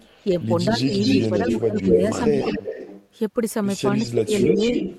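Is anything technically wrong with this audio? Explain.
Yes, there are two recurring faults.

Echo leak: a delayed copy of the speech trails it by about a quarter second (247 to 261 ms). It is faint from 0.0 to 0.46 s, then about as loud as the direct speech from 0.82 to 3.08 s and from 3.96 s to the end. The likely cause is a far-end loudspeaker whose echo canceller let its microphone's pickup return down the line.

Speech suppressed in double talk: the speech dips in pieces from 0.67 to 0.81 s (around 10 dB), 1.29 to 2.65 s (up to roughly 15 dB) and 4.03 to 4.79 s (up to roughly 20 dB). These dips likely occur because the canceller couldn't separate talker from echo and attenuated both.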